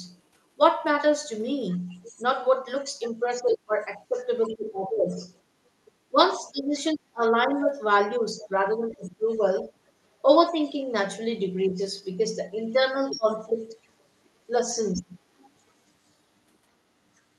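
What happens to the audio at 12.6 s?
From 12.56 to 13.84 s, a second voice from the other side of the call leaks in underneath the main talker, sitting about 10 dB lower. This is most likely residual echo: the far end's audio played on the talker's loudspeaker reached the microphone, and the echo canceller failed to remove it. It differs from the talker's own voice echoing back because it is a different voice, and it differs from someone speaking in the room because it comes from the call's own playback.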